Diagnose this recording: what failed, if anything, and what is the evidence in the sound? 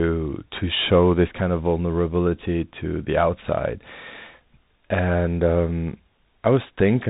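The codec stage failed: Bluetooth CVSD headset codec throughout. Speech stops above 3.8 kHz. One-bit adaptive steps can't track loud highs, so distortion is plainly audible.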